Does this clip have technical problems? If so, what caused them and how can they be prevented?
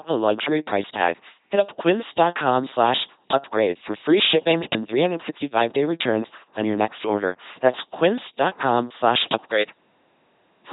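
Yes, the whole clip has a heavy LPC-10 vocoder sound: buzzy, robotic speech with nothing above 3.9 kHz, which fits a 2.4 kbit/s stream. Every moment is modelled as either pulse-driven or noise-driven, so buzzes or hiss appear wherever that voicing choice goes wrong. To prevent it, send the audio through a modern wideband codec at a higher bitrate.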